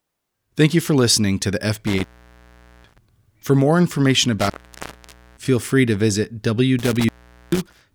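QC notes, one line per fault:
1.87–2.98 s, intermittent contact: after "for listening to the" the speech drops out for about 0.8 s, crackle at each edge as a loose connection opens and recloses.
4.39–5.48 s, intermittent contact: following "more information" the line opens for about 0.88 s, leaving faint hiss between crackling edges before "free to visit" resumes.
6.79–7.81 s, intermittent contact: after "free to visit" a shorter dropout of about 0.44 s, the contact briefly breaking with crackle as signal cuts and returns.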